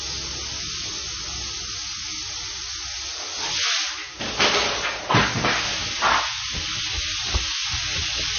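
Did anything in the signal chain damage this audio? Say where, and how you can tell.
Yes, at the codec stage, throughout. The audio sounds watery and swirly, with nothing above 6.5 kHz. A spectrogram shows a flat ceiling there and flickering holes below it. This is likely MP3 compression starved of bits, which fits a bitrate near 22 kbps.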